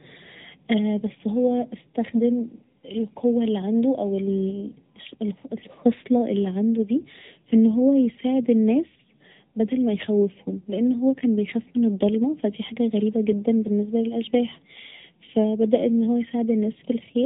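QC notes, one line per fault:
throughout, channel delay (comb filtering): one channel lags the other by a fraction of a millisecond, and when both are summed to mono the shared speech cancels at evenly spaced frequencies. The first notch is around 1.5 kHz, with more above it, giving a hollow, phasey colour.
throughout, AMR narrowband mobile codec: nothing passes above 3.9 kHz, so the speech sounds boxed into a phone band. The codec rebuilds each short frame from a vocal-tract model driven by sparse pulses, leaving a plainly audible buzzy, synthetic edge that fits a mid-rate mode around 10 kbps.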